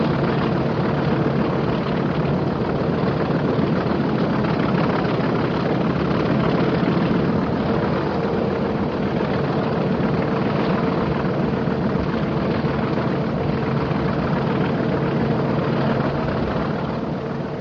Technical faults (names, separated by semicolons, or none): none